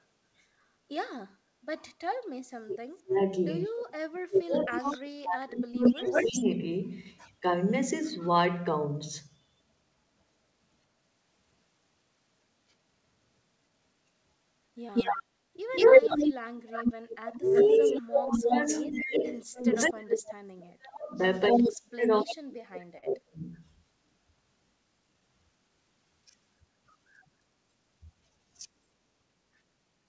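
From 2.63 to 6.6 s the echo canceller likely mistook simultaneous talk for echo, so the speech drops by up to about 40 dB, breaking up for roughly three seconds: speech suppressed in double talk.

Within that span, at 4.73 to 4.77 s, a far-end echo canceller likely failed to clear its loudspeaker pickup, and echo leak returns a brief copy 230 ms late, about 10 dB below the speech. The same leak recurs at 5.84 to 7.3 s at full speech level and 187 ms behind, and again at 8.21 to 8.28 s as a faint scrap about 25 dB down.

From 14.94 to 19.89 s the echo leak returns as a sustained copy 283 ms late at equal level.

Speech suppression in double talk begins again at 17.31 s and lasts until 23.56 s, cutting the speech in pieces for about five seconds, up to about 40 dB deep.

From 21.48 to 22.34 s, a 283 ms echo leaks through at equal level.

At 22.98 to 23.04 s a late packet empties the jitter buffer, and this short stall from a late packet stretches the sound by 45 ms, with nothing lost.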